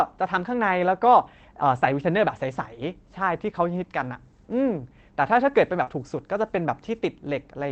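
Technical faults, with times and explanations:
1.13–1.19 s and 5.87–5.93 s: lost packet rebuilt from error correction. About 40 ms each time, consistent with two lost packets, is played from the low-bitrate copy carried in the next packet, so there is no gap, only a rougher, noisier stretch.
5.83–5.89 s: short concealed packet loss. About 40 ms arrived too late, and roughly 34 ms of it is filled by extending the preceding sound, heard as a brief smear before the audio blends back in.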